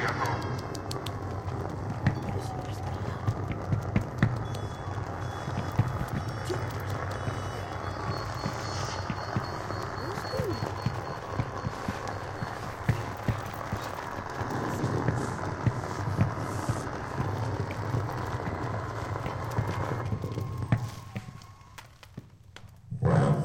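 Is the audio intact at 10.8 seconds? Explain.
Yes, the audio is intact at 10.8 seconds, with no dropout, click, distortion or other fault at that moment.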